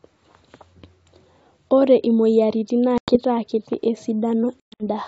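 At 2.98 to 3.16 s the speech drops into an abrupt, hard-edged hole, about 100 ms of lost audio, roughly five packets, and comes back slightly distorted. From 4.61 to 4.83 s it breaks up again: 180 ms goes missing in gaps scattered over 200 ms, the longest 120 ms, roughly ten packets. This is packet loss on an ADPCM call. The silence fills cause the decoder's adaptive predictor and step size to drift from the sender's, so each restart sounds wrong for some tens of milliseconds. The G.722 wideband coding stays clear between the breaks.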